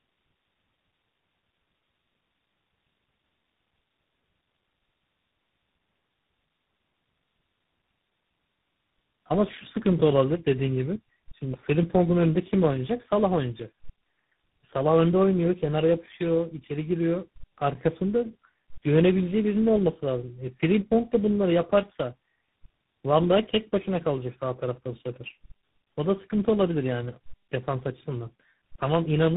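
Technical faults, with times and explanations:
Throughout, tandem speech coding: the speech passes through three low-rate speech codecs in a row, with G.711 A-law links between them. It goes from AMR-NB at 7.4 kbit/s to GSM full rate at 13 kbit/s to G.726 at 24 kbit/s. Each coder has to model audio the previous one already roughened, so the errors stack up. You get a gritty, muffled, warbly quality, worse than any single hop would give, and nothing survives above about 3.8 kHz.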